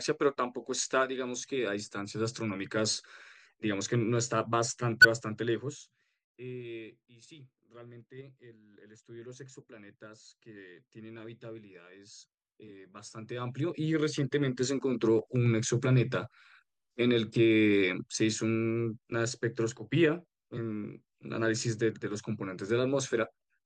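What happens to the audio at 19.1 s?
At 19.11 s the speech skips forward: compressed frames are skipped, so a short stretch of about 40 ms of audio is never played, whether the frames were missing or the decoder rejected them as damaged. The jump lands on a frame boundary. That sets it apart from a dropout, which would leave a silent gap.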